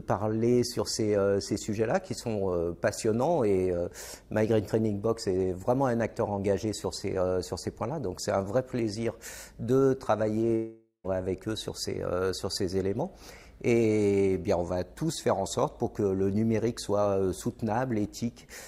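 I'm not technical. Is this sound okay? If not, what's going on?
No. At 10.55 s the audio cuts out and the last sound is drawn out into a buzzing hiss that fades away, followed by about 0.11 s of near silence. Normal sound returns at 11.06 s, but roughly half a second of material is simply gone. This is a long network dropout: the stream likely stopped arriving for a moment, the player covered the gap by stretching out what it had, then skipped ahead once the audio returned.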